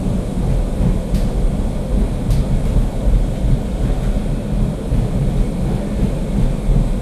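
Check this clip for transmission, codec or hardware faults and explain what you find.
Nothing in the signal points to a transmission, codec or hardware problem; the sounds arrive continuous and intact, with no audible damage to the audio path.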